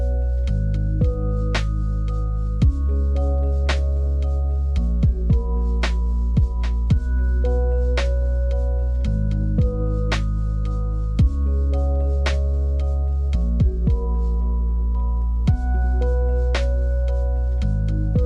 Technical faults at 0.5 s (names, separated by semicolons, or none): none